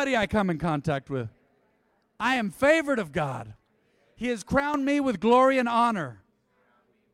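A sudden gain jump hits this speech recording at 4.6 s, lasting until 4.74 s, just before "me with glory and". The level falls by about 8 dB in one step rather than a fade, and the background noise drops with the voice, so the whole signal, not the talker, changed. The likely cause is a digital gain setting or bit shift applied without a ramp, which leaves an abrupt edge at the transition.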